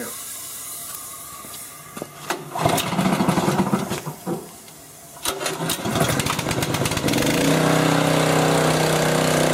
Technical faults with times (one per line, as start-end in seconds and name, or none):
0.95 electrical switching spike
6.49 electrical switching spike